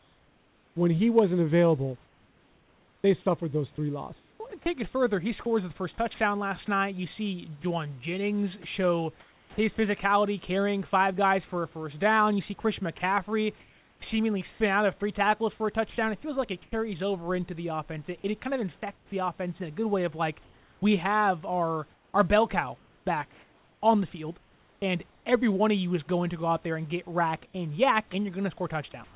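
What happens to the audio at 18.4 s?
From 18.2 to 19.12 s, the real room background becomes steady, featureless hiss until "offense in a good," likely comfort noise in place of the background, synthesised during a transmission pause.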